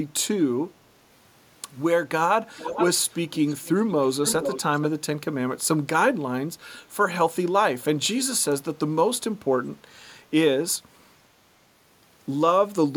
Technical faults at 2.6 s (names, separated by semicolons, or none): echo leak